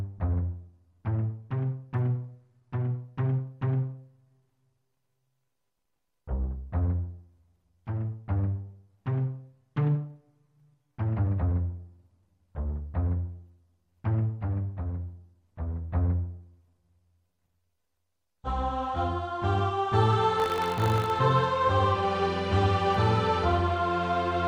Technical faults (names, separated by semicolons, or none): buffer tearing